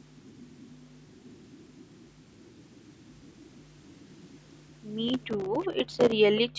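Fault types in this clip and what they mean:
Processor overload crackle: The machine handling the audio couldn't get its small buffers out on time, and whenever one missed its deadline, a tiny hard-edged gap of silence was left in the stream. From about 5.08 to 6.12 s those dropouts pile up into a gritty, tearing crackle riding on the speech. The spacing of the gaps points to buffers only a few milliseconds long, with dozens of them missed before the load eases off.
Echo leak: Two brief ghostly scraps of speech turn up, at 5.62 to 5.68 s and at 6.36 to 6.41 s, each trailing the original by about 370 ms. The likely cause is an echo canceller on the far end that didn't fully scrub what its mic caught from a loudspeaker, so some of it was sent back. The first scrap is very faint, and the second is clearly louder and easier to catch.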